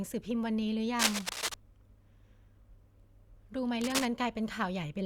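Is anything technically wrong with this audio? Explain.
Yes. From 0.97 to 1.55 s and 3.81 to 4.05 s, cable scratch noise, likely from a worn connector whose contact resistance fluctuates, adds rough rustling about as loud as the speech, visible as ragged broadband smears and jagged waveform bursts.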